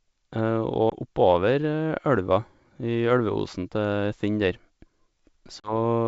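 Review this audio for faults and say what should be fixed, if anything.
Packet loss on an ADPCM call shows up twice, at 0.90 to 0.93 s and 5.61 to 5.73 s. There's a hard-edged hole of about 20 ms, then about 40 ms, roughly one and two packets. The decoder's predictor and step size drift from the sender's, so the audio comes back with some distortion before settling. Adding packet loss concealment and a jitter buffer would fill those gaps and let the decoder state resync more gently.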